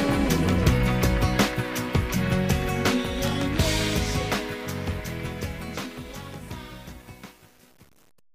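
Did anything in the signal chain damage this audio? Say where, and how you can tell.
No, nothing in the chain audibly damaged this audio: at no point does any stage leave an artefact a listener could pick out.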